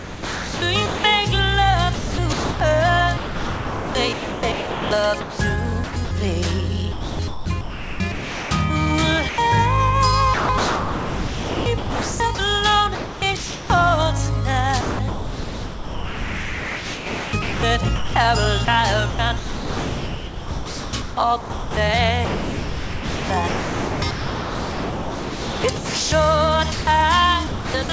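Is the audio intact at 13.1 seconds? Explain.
No. At 13.1 seconds the sound is choppy: between 10.34 and 13.70 s, stretches totalling about 2.3 s drop out and are filled with synthetic background noise. This is sound chopped by the voice detector, likely because the sender's detector kept switching transmission off and on, with the receiver inserting RFC 3389 comfort noise whenever nothing was being sent.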